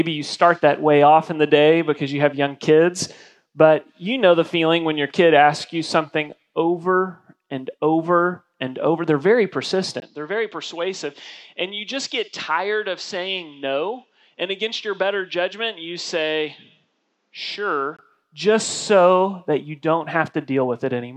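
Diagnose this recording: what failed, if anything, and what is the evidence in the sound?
At 10.0 s the audio drops out for about 20 ms, then returns duller and boxier, roughly 10 dB quieter, with nothing above 7.9 kHz and a new background noise floor around 45 dB below the signal. At 18.0 s the full band and original level return. This points to the driver or device-selection stage: the system likely switched to an input switched to a poorer device, a narrower-band microphone or headset profile with its own tone, gain and noise, then switched back.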